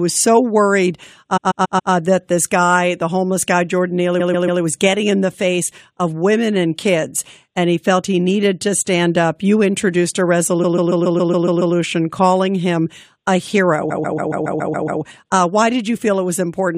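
A stutter loops the same short stretch of speech, about 140 ms long, from 1.36 to 1.92 s, 4.19 to 4.61 s, 10.62 to 11.74 s and 13.90 to 15.01 s. These are repeated frames, where the decoder replays duplicated compressed frames.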